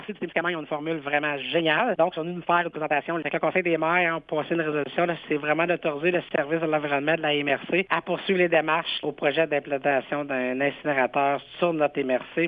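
A time-stretched section runs from the start to 3.64 s, where the audio plays at about 1.59 times normal pace with its pitch unchanged, sounding rushed before the pace abruptly settles. It was likely squeezed by software that dropped short pieces to fit a shorter length.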